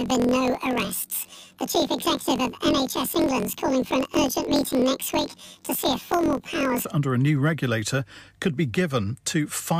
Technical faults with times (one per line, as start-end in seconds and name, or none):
0.00-6.86 planar audio read as interleaved